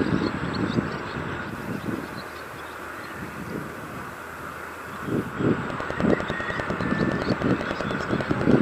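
Digital radio blending to analogue runs from 1.43 s to 5.40 s. The receiver lost its digital stream and cross-faded over about 127 ms to the FM broadcast of the same station, then faded back at the end. During the FM stretch the level drops by about 4 dB and a steady hiss sits roughly 25 dB below the sound, giving a noisier texture until the digital path returns.

A train of clicks follows from 5.70 s to 8.52 s. Pulses of much the same shape arrive at a regular pace of about 10 per second, around thirty in all, peaking roughly 15 dB above the sound. They are heard as an even ticking laid over the audio, including its quieter moments. The source is likely interference from nearby equipment or a faulty connection injecting the same pulse repeatedly.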